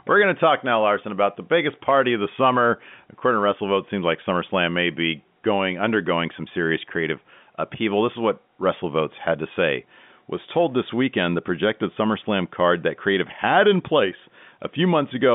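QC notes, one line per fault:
No faults found.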